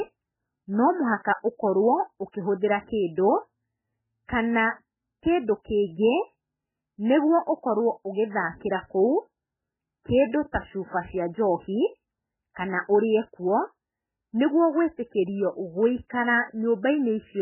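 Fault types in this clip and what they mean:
MP3 compression: likely a very low-bitrate MP3, around 8 kbps, leaving nothing above 3 kHz and heavy watery, swirly smearing across the whole speech.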